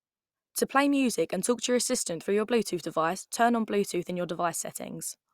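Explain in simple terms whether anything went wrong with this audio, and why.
Nothing went wrong here; this speech recording has no faults.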